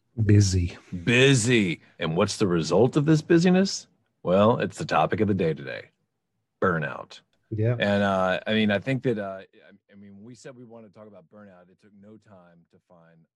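No technical faults can be heard anywhere in the speech. The level rises and falls gradually, as with a fader, and each change moves smoothly without any jump or step.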